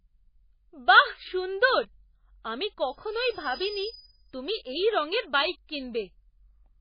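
Throughout the speech, heavy damage that is likely from MP3 compression leaves watery, swirling artefacts and smeared attacks, pointing to a very low bitrate near 18 kbps. On a spectrogram, nothing appears above 5 kHz, and weak components flicker in and out between frames.

From 2.83 to 4.31 s, a loudspeaker feedback squeal occurs. The microphone-loudspeaker loop runs away at 5 kHz, swelling over about a second to roughly 10 dB above the speech. It shows as one bright horizontal line before "তুমি এই রঙের বাইক".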